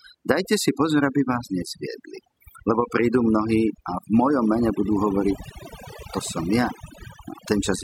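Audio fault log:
Throughout: overdone noise removal. The background drops and breaks up into twinkling, chirpy specks. Noise reduction set far too strong is cutting individual frequency bands whenever they sit close to its noise estimate, taking quieter parts of the speech along with the noise.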